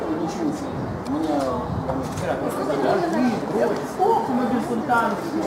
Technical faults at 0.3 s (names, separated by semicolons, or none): crude rate conversion